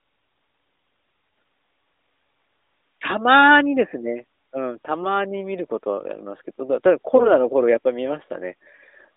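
Speech carried over an AMR-NB narrowband link, band-limited to about 300 Hz to 3.7 kHz and consistent with the 12.2 kbps mode. From 7.16 to 7.32 s, AMR bit errors turn the sound briefly hoarse and gargly: flipped low-priority bits, at a rate of several percent, misplace excitation pulses and skew the pitch, gain and spectral values across roughly six frames.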